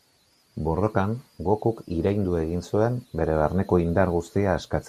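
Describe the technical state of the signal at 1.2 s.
At 1.2 s the speech carries the same damage heard across the whole clip, likely MP2 compression at a starved bitrate, which fits a rate near 80 kbps. Too few bits leave upper sub-bands switched off or flickering, so the top end sounds dull and what remains is coarsely quantised into a gurgling, granular roughness. Unlike a plain low-pass filter, the treble here comes and goes rather than being cleanly removed.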